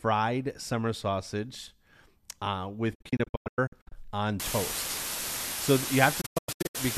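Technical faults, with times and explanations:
2.95 to 3.92 s, digital broadcast dropout: the speech breaks into short muted holes over about a second, each fading out in 8 ms, longest 96 ms, as the receiver mutes bad frames.
4.40 s to the end, low bit depth with dither: a steady, even hiss nearly as loud as the speech, with no distortion, which fits roughly 5-bit audio with dither.
6.21 to 6.78 s, digital broadcast dropout: another burst of short muted gaps over about half a second, longest 96 ms, where failed frames were silenced and that speech is lost.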